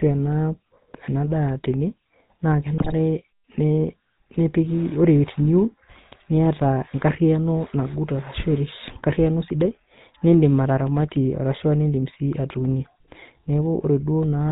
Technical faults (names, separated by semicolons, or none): GSM full-rate codec; GSM bit errors